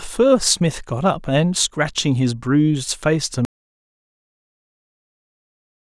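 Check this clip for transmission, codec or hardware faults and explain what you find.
There's one fault: an audio dropout to silence at 3.45 s, running to the end, likely a lost input with silence written instead, so the speech cuts to silence with no room tone.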